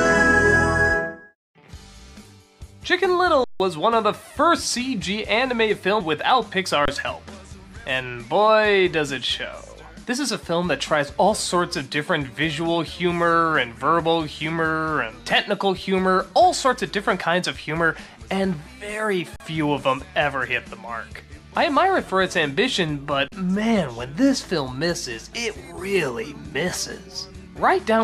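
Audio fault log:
3.44–3.60 s, 6.85–6.88 s, 19.36–19.40 s, 23.28–23.32 s: underrun with held sample. The output buffer ran empty for 160, 27, 40 and 40 ms. The converter froze at its last value, so the sound stops with little or no click. Live audio was skipped meanwhile.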